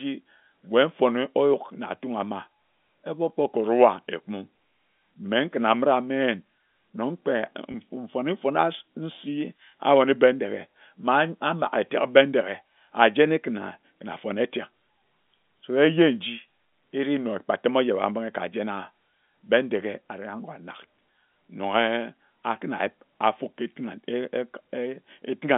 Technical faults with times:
7.72-7.74 packet loss with pitch repetition

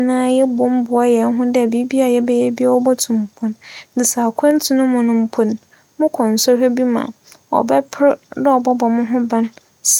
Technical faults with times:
none

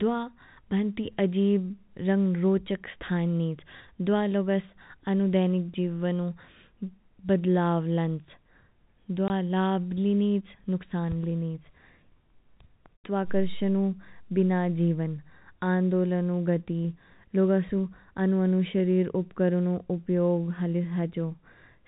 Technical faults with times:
9.28-9.30 packet loss filled with silence

